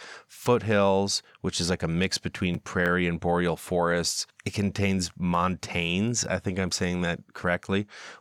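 From 0.38 s to 7.82 s, about ten clicks recur every 0.83 s through the speech, likely clock drift buffer slips: a clock mismatch of roughly 200 ppm drops or repeats a handful of samples each time. A spectrogram shows evenly spaced thin vertical broadband lines, and the waveform shows tiny step discontinuities.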